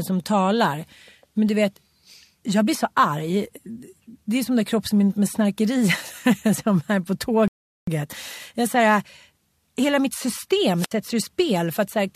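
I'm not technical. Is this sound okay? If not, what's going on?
No. At 7.48 s, right after "som är på", the speech stops dead for about 0.4 s, then carries on exactly where it left off, with nothing missing. That's a rebuffering stall: the player ran out of downloaded audio and waited for more to arrive.

At 10.76 s there's a short burst of hiss, then a gap of near silence lasting about 70 ms, and the speech comes back by 10.93 s. That's a wireless microphone squelch dropout: the radio link faded, so the receiver briefly muted itself.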